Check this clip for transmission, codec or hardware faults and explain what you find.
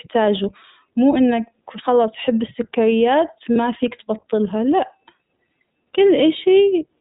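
The speech carries two faults: narrowband iLBC coding throughout and one brief frame loss.

Throughout, iLBC codec coding removes everything above 4 kHz, leaving a plainly rough, synthetic timbre that fits the 15.2 kbps, 20 ms mode. On a spectrogram there is a hard ceiling at 4 kHz.

From 3.52 to 3.57 s, just before "فيك تبطلها لأ", lost iLBC frames were concealed by a repeated pitch cycle mixed with noise. This fits about 40 ms, or two frames, and sounds like a buzzy held vowel. The waveform shows repeating cycles, and the spectrogram shows static, smeared harmonics.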